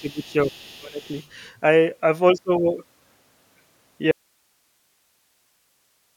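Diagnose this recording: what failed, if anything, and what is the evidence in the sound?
Call processing: speech suppressed in double talk from 0.0 to 0.52 s and 0.78 to 1.06 s, dipping around 15 dB, likely an echo canceller attenuating both talkers.

Call processing: the other side's voice leaking through from 0.05 to 1.29 s, around 30 dB below the speech, likely echo left uncancelled from the loudspeaker.

Signal path: an audio dropout to a faint residue at 4.11 s runs to the end, leaving hiss around 45 dB down, likely a lost input while the downstream path stayed live.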